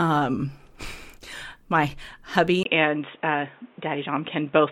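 Speech, with a clear change of sound at 2.63 s that lasts to the end: it drops out for about 20 ms, then comes back noticeably duller, with nothing above 3.8 kHz. The loudness stays about the same, but a new, fairly quiet background noise comes in, roughly 35 dB under the speech. That pattern points to an input switched to a poorer device, likely a fallback mic or a headset's call profile taking over mid-recording.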